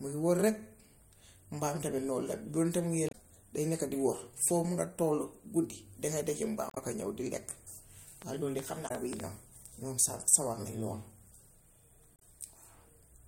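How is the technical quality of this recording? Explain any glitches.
The recording has two kinds of fault: brief breaks in the compressed stream at four points, and a short burst of clicking.

Damaged data in a compressed stream occurs at 3.09–3.15 s (just before "day nekka di wax"), 6.69–6.78 s (between "danga dégga" and "ka ñów di lekk"), 8.85–8.91 s and 12.16–12.22 s. Corrupted bytes make the decoder lose frame sync and hunt for the next header. Each break is a brief glitch, unlike repeated identical clicks.

A train of clicks runs from 8.22 to 9.21 s. It is about ten similar pops at an uneven pace of roughly 5.2 per second, peaking around 10 dB above the speech. The likely cause is electrical interference or a faulty connection. Unlike the stream damage, the pops repeat with the same shape.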